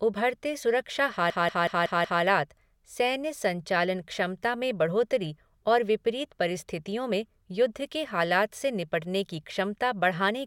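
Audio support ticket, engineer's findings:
Machine-gun stutter in speech, 1.3 to 2.23 s: one 186 ms fragment repeats exactly five times at 5.4 Hz. System hang loop. Driver or host froze while the audio device kept replaying its ring buffer; loop length fits an 8192-sample buffer. Speech resumes where it stopped, with next to nothing missing.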